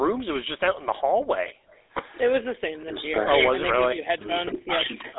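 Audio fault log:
throughout, GSM full-rate codec: buzzy, gravelly roughness on the speech, with nothing above 3.8 kHz, typical of the GSM full-rate codec at 13 kbps.
1.55–1.70 s and 2.46–2.56 s, background gated by the echo canceller: room sound briefly drops out by about 40 dB as the echo canceller ducks the microphone during loudspeaker playback.
2.84–3.29 s and 3.74–4.32 s, speech suppressed in double talk: speech dips by about 20 dB, then about 30 dB, likely the echo canceller clamping down while both sides talked.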